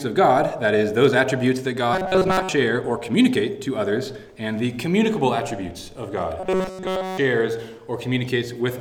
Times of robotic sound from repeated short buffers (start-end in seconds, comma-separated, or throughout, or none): 1.93-2.49, 6.40-7.18